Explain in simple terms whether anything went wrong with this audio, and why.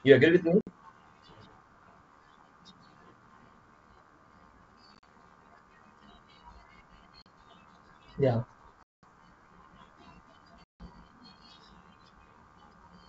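Packet loss on an ADPCM call causes five dropouts. The sound cuts to silence at 0.61–0.70 s, 4.95–5.05 s (broken up), 7.22–7.27 s, 8.83–9.04 s (longest, 200 ms) and 10.64–10.88 s. Each time, the receiving decoder loses track of its running prediction, so speech returns slightly distorted before settling. The wideband G.722 sound itself stays clear.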